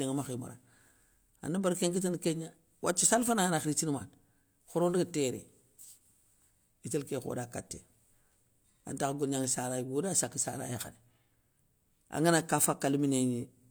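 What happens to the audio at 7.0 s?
Nothing goes wrong at 7.0 s; the speech carries on intact through that moment.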